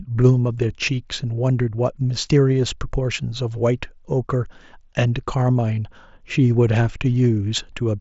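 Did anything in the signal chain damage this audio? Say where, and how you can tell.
No, nothing in the signal chain damaged this speech.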